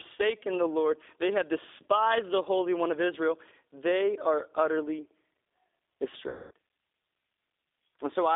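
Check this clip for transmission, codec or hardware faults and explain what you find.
Two faults here: the whole speech clip has been through a low-rate codec, and there's a dropout patched over near the end.

The G.729 codec sits on the entire clip, and its damage is plainly audible. The band runs from roughly 300 Hz to 3.6 kHz, so everything sounds thin and boxed in. The roughness and slightly synthetic edge come from the voice being rebuilt from a vocal-tract filter, a pitch predictor and a few pulses per frame rather than the actual waveform. That's consistent with 8 kbit/s G.729A.

The second fault is VoIP packet loss concealed by the speech codec, from 6.29 to 6.51 s, about 220 ms in all, which fits around 22 missing 10 ms frames. Instead of a silent gap, the decoder keeps extending the last pitch and filter settings while turning the gain down frame by frame. You hear the sound smear into a buzzy tone or a coloured noise that fades. 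Because each frame leans on the one before, it stays weak and a bit warped for a short while after real audio resumes.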